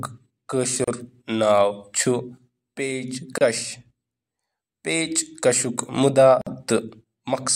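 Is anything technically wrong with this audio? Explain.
Yes. Gaps at a join of encoded pieces occur at 0.84 s (about 34 ms), 3.38 s (30 ms) and 6.41 s (52 ms). The speech was encoded in separate pieces and butted together untrimmed, so encoder delay and end padding leave short silences with smeared edges before the speech resumes where it stopped.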